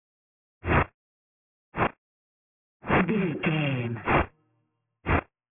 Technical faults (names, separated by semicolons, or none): aliasing